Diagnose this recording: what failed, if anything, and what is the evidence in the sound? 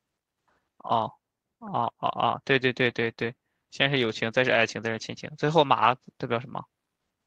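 Clock drift between sender and receiver, at the network and jitter-buffer stage, runs through the whole recording. The sender's clock is about 2% slow, so the receiver's buffer keeps draining. Packet loss would leave irregular gaps or muffled patches. Here the hiccups are small, recur at uneven intervals, and all lean one way, toward stretching the sound. Pitch stays put, unlike tape-style wow or flutter, which would bend it.

Repeated timing corrections appear from 0.60 s to 7.03 s. These are the receiver's response to the drift: it keeps repeating short slices of the speech to refill the buffer. The effect is a tempo of about 97% and roughly 150 ms added across that span, heard as a faintly unsteady, dragging rhythm. A single underrun would give one gap. These edits are many and small, all adding time.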